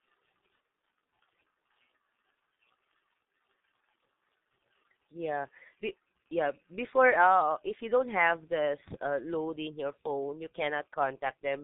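The whole clip has been through a G.723.1 codec, and heavily. Nothing gets past about 3.8 kHz, so the speech sounds muffled, and the slow, coarse voice modelling, which fits the 6.3 kbit/s mode, leaves it hoarse with smeared consonants.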